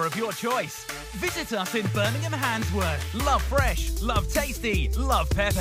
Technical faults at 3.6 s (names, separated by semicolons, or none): none